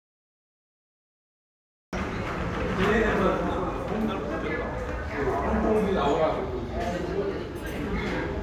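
Nothing but digital silence until 1.93 s, then a cut-off start: capture began late, so the sound jumps in mid-event with no attack or fade-in.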